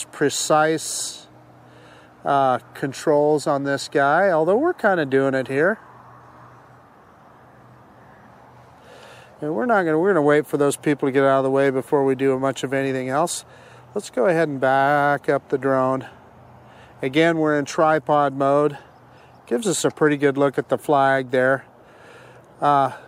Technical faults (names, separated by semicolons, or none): none